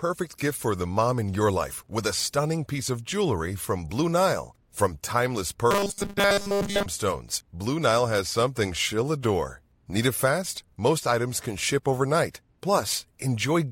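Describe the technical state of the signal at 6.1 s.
At 6.1 s you're right in the middle of a stretch of robotic sound from repeated short buffers, running from about 5.71 to 6.86 s. The speech collapses into a stiff, metallic buzz pinned at 200 Hz. That's likely a playback path starved of new audio, looping a 5 ms chunk over and over, so most of that stretch is repeats rather than fresh signal. The buzz still loosely tracks the talking underneath.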